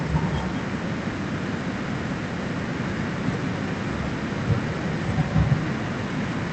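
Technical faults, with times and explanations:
Throughout, echo with no canceller: every phrase is followed about a fifth of a second later by a second copy, only about 7 dB quieter, sounding thinner than the direct signal. The far end is playing the call through a loudspeaker, its microphone picks that playback up, and no echo canceller removes it, so the sound returns after the network round trip. The call path itself band-limits everything to about 8 kHz, consistent with a wideband Opus setting.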